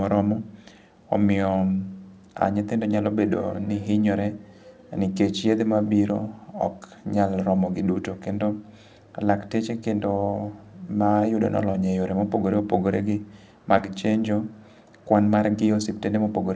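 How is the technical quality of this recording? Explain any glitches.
Two brief glitches break the speech, at 11.72–11.76 s and 13.78–13.81 s, heard as a quick smear or wobble. Both are short concealed packet loss: 20 ms of audio arrived too late, so the receiver extended the preceding sound, then blended back. The call path carries nothing above 8 kHz, which fits a 64 kbps G.722 wideband codec.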